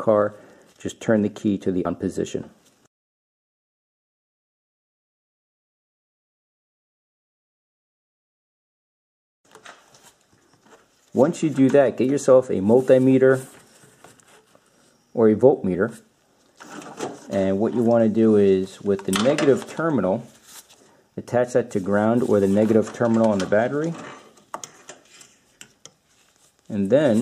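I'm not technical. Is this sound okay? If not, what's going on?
No. At 1.84 s and again at 10.65 s the audio jumps forward, losing a short stretch each time: roughly 150 ms at the first spot and about 300 ms at the second. This is called compressed frames skipped. The file is stored in small chunks, which here fits chunks of about 26 ms, and a handful of them were missing or rejected as damaged. Unlike a dropout, there is no silent gap; the sound simply jumps ahead.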